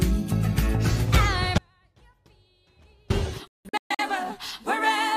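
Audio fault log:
1.58–3.10 s: audio dropout to a faint residue. The signal is cut abruptly for about 1.5 s, but the gap is not silent: a faint trace of the sound remains, roughly 35 dB down. That points to a likely break ahead of a still-live path.
3.47–4.02 s: digital broadcast dropout. Unlike the earlier gap, this one mutes to silence with 3 ms fades, in several short holes totalling 384 ms across 512 ms. The longest hole is 170.7 ms, and nine frames were lost in all.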